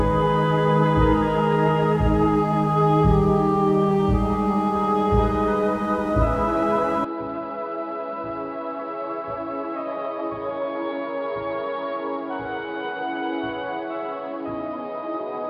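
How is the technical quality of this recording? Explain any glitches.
The recording has one clear glitch. From 7.05 s to the end, the sound abruptly turns duller and boxier, with nothing above about 5 kHz, and drops by about 10 dB. A faint new background noise, far below the signal, also appears, with no gap at the change. This points to an input switched to a poorer device, likely a different microphone or a headset call profile whose narrower band, lower level and own noise floor replace the original path.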